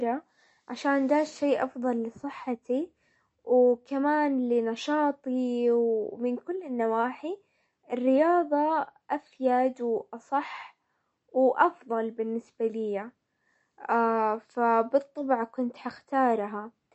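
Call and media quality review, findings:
Speech, whole clip: MP3 compression likely. Watery, swirly texture, metallic chirps on s sounds, nothing above 8.1 kHz, consistent with roughly 40 kbps. Spectrogram: hard ceiling, flickering holes where weak lines drop per frame.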